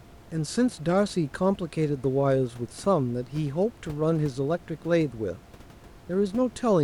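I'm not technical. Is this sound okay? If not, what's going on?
Yes, this one's fine: the faint background noise of the room behind the speaker is just part of where it was recorded and sits well underneath the speech.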